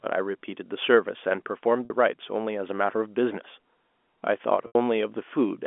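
Packet loss with pitch repetition at 1.85 s and 4.67 s: the receiver lost about 50 ms, then 80 ms, consistent with five and eight 10 ms packets, and filled each gap by repeating the last pitch period, heard first as a briefly held, buzzy tone over the telephone-band speech, while the longer second gap fades into silence before the speech returns with a short cross-fade.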